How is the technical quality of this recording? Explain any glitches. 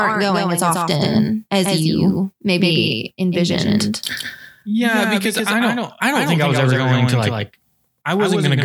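The quality is compromised by a doubled audio track running through the whole speech clip. A second full-band copy trails the original by about 150 ms, roughly 5 dB quieter. It has no decay or room colour. The likely cause is the same signal captured again through a slower path, producing a dry, slapback echo on every syllable.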